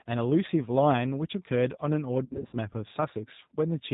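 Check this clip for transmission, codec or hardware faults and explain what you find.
Two faults are present: a low-rate speech codec throughout, and a burst of concealed packet loss.

G.729 codec, throughout. Speech is rebuilt from a filter, pitch predictor and sparse pulses. Nothing above 4 kHz, with a rough synthetic edge, fits roughly 8 kbit/s.

VoIP packet loss concealed by the speech codec, 2.25 to 2.57 s. About 200 ms of gaps are scattered across that span, the longest run 60 ms. The decoder stretches the last sound into a fading buzzy tone or coloured noise, and the sound stays weak after packets return.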